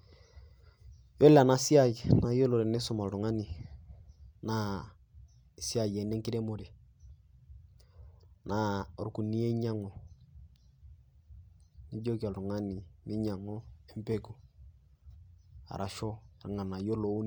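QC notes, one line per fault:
The speech signal shows no technical faults at any point.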